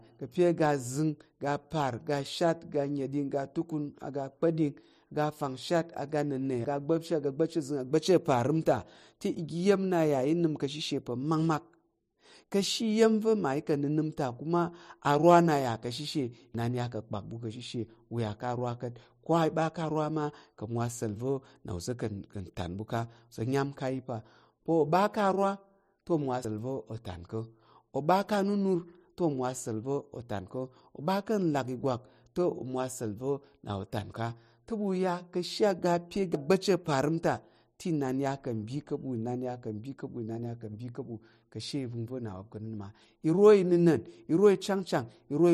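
Audio missing between chunks occurs at 16.55, 26.45 and 36.35 s. Each time the speech jumps ahead abruptly, with roughly a tenth of a second gone and the two sides butted together with no gap of silence. The regular spacing of the skips points to a recorder or processor handling the audio in 10-second blocks, likely dropping a short stretch each time it closed one block and started the next.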